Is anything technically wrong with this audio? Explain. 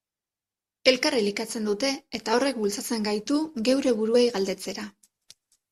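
Yes. Compressed frames are skipped at 2.32 s and 4.14 s. Each time, about one 21.3 ms frame goes unplayed and the speech jumps ahead.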